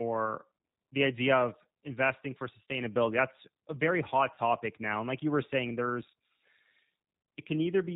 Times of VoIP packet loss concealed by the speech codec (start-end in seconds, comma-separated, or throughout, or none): 4.35-4.39